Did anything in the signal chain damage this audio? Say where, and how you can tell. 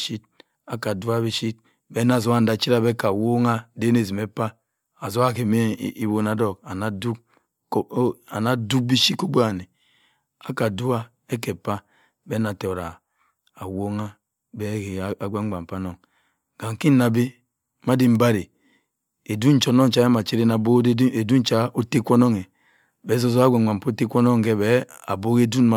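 No, nothing along the chain from capture to playback audibly damages this speech recording.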